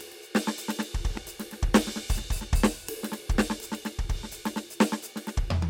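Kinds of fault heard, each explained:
Loud pop: a single sharp pop sits on top of the music from 1.17 to 1.19 s, peaking roughly 10 dB above it, while the music carries on underneath. It is likely a brief voltage step or pulse entering the signal chain.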